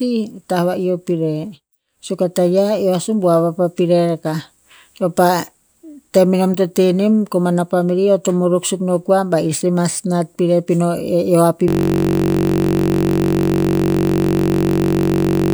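At 11.68 s, just after "eo a", a system hang loop begins and runs to the end. A single 21.33 ms slice repeats exactly, which fits a 1024-sample buffer, and produces a steady 46.9 Hz buzz. Unlike mains hum, it carries the timbre of the frozen sound.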